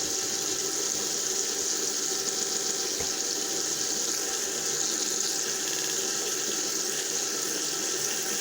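From 2.40 to 2.82 s, repeated frames: a 139 ms stretch plays three extra times, then a 65 ms stretch four extra times from 5.71 to 5.93 s. The repeats add 418 ms and 221 ms. Unlike a dropout, nothing goes missing; identical material recurs and the sound simply runs longer.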